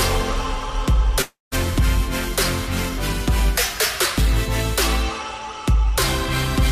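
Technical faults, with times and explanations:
1.22–1.55 s, long network dropout: the last sound is stretched into a fading buzz, then falls to about 160 ms of silence before audio resumes. About 300 ms of material never returns, likely because packets stopped arriving and the receiver's concealment filled the gap.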